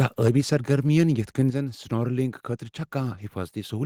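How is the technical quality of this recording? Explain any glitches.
The recording has one clear glitch, a sudden drop in level partway through.

At 1.5 s, between "یتھہٕ کٔنہِ" and "زن سنورکلنگ خٲطرٕ چھا", the speech and the background both fall abruptly by about 7 dB, as if a fader had been pulled down in a single step. This is the microphone volume stepped down, likely by the call software's automatic input control reacting to a level it judged too hot and cutting the device's input gain at once rather than easing it.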